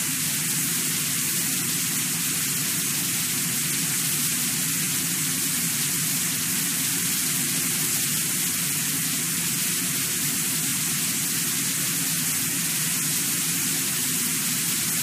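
Around 10.68 to 10.71 s there's a quick stutter where a 23.2 ms slice plays twice, which fits a single compressed frame being repeated. At 12.70 to 12.75 s it happens again with a 46.4 ms block, likely two frames' worth, played one extra time. Both are repeated frames: the decoder gets the same chunk again, so you hear a tiny hiccup, and the audio runs slightly longer.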